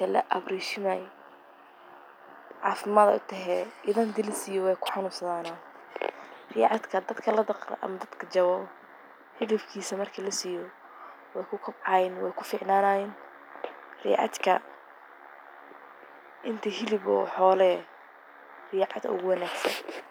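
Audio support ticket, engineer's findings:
No faults found in the audio path on listening.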